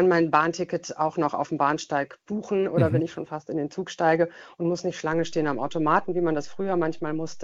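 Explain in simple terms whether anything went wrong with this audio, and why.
At 5.13 s a DC step causes a low thump as the waveform's zero line jumps and stays shifted to the end, while the sound itself continues unchanged, unlike a dropout.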